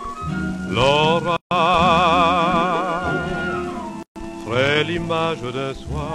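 A gap at a join of encoded pieces opens at 1.37 s and runs to 1.51 s, about 145 ms long, and a second gap at 4.03 to 4.16 s lasts about 131 ms. Separately encoded pieces were joined without trimming, so each encoder's start-up delay and last-frame padding remain. The sound drops out with smeared edges, then resumes exactly where it stopped.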